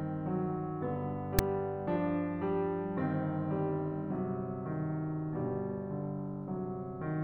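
At 1.39 s, file tags are played as audio. Text read as samples gives a hard-edged, one-sided rasp ending in padding silence, unlike a centred click.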